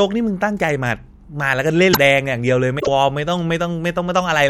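Speech with two bursts of damaged data in a compressed stream, at 1.90 to 1.98 s and 2.78 to 2.88 s. Corrupted bytes break the frames there, so the decoder misreads them and loses sync until the next valid frame header, giving short glitches.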